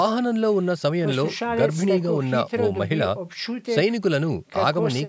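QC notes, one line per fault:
Nothing stood out on listening to this speech clip.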